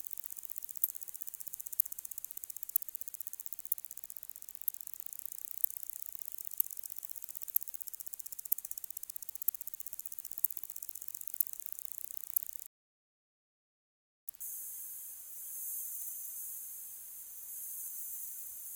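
Low bit depth with dither runs throughout: the audio is held at only 9 bits, so dithered rounding leaves a constant, even hiss roughly 20 dB below the sound, without distortion. Audio dropout to silence occurs from 12.67 to 14.28 s. The input was likely lost while writing continued, leaving 1.6 s of dead silence with no background.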